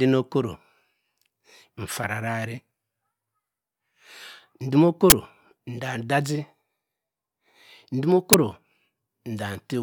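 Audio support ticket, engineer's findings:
Uninitialised buffer: playback block consumed before the audio was written, so stale memory is output as samples. Heard as abrupt, loud digital noise bursts, 5.1–5.12 s (20 ms block) and 8.33 s (10 ms block), within the speech.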